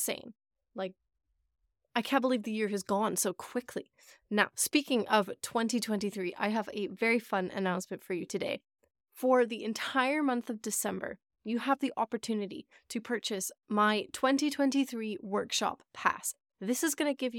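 No technical faults are audible.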